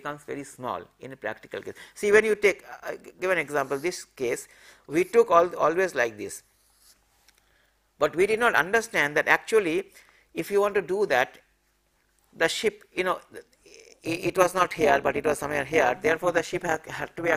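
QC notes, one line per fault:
13.90–17.36 s, overlap-add ripple. The level starts pulsing rapidly near 13.9 s and keeps it up to the end. Each swing is about 11 dB deep. The rate is around 200 per second. That is fast enough to merge into a metallic buzz with extra tones around each note rather than a countable flutter. The sound was split into windowed frames and summed back together. The overlap did not add up to a flat gain, so loudness rises and dips once per frame.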